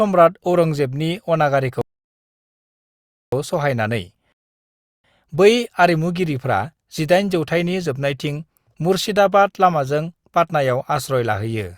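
At 1.81 s the speech cuts to silence for about 1.5 s, then resumes at 3.33 s. A second gap runs from 4.32 to 5.04 s, about 0.7 s. Both are rebuffering stalls. The player ran dry and waited. Nothing is skipped; time is added.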